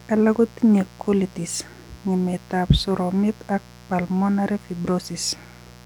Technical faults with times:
0.00-5.85 mains buzz

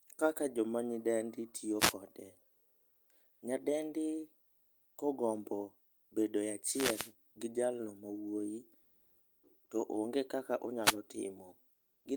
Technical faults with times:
1.78-1.94 wireless microphone noise hit
2.53-3.07 comfort noise in place of the background
4.45-4.93 comfort noise in place of the background
6.68-7.13 wireless microphone noise hit
8.83-9.43 comfort noise in place of the background
10.82-10.97 wireless microphone noise hit
11.77-12.01 comfort noise in place of the background

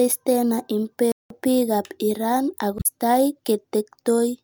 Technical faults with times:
1.12-1.30 playback stall
2.76-2.86 damaged data in a compressed stream

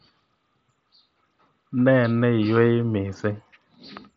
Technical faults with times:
none

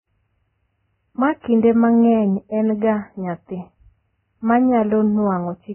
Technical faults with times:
0.00-5.74 Vorbis compression

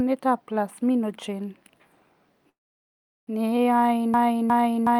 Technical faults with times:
2.49-3.29 call audio freeze
4.14-5.00 broken-record loop

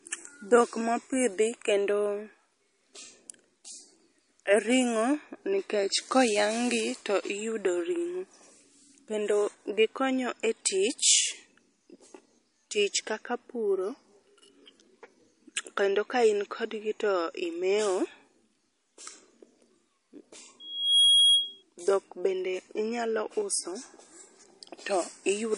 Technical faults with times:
0.00-25.57 MP3 compression
20.60-21.63 loudspeaker feedback squeal

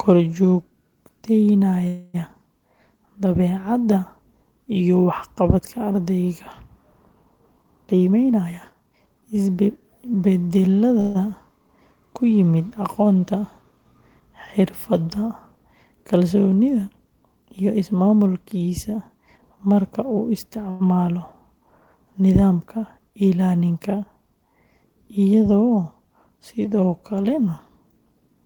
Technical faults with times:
1.87-2.16 call audio freeze
7.58-10.05 jitter buffer speed-up
11.00-11.17 call audio freeze
17.43-19.81 jitter buffer speed-up
20.70-20.82 short stall from a late packet
27.29-28.35 jitter buffer speed-up

